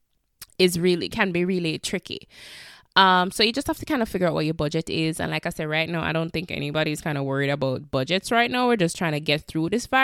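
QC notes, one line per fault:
No faults found in the speech. Nothing on the listen called for a note.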